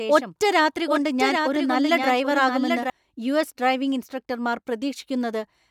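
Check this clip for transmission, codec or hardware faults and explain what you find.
There's one fault here, a doubled audio track running from the very start of the clip until it cuts out abruptly at 2.9 s. A second, full-band copy of the speech trails the original by roughly 0.7 s, a few dB quieter, with no decay or room colour. That points to the signal likely being picked up again through a slower path and mixed back in. It sounds like a flat, late echo stepping on the speech.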